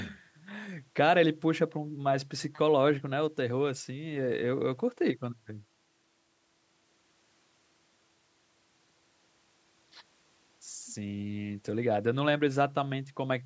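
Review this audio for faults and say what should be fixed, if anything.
Nothing stood out on listening to this speech, so there is nothing here that needs fixing.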